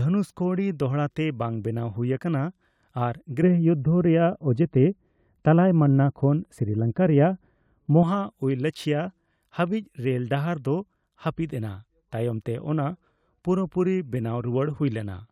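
De-emphasis applied wrongly from 3.43 to 8.03 s dulls this speech recording: a treble-cutting filter meant to reverse pre-emphasis acted on audio that needed no such correction, tilting the response steadily downward to about 11 dB lower at 10 kHz than at 1 kHz, so the sound turns muffled.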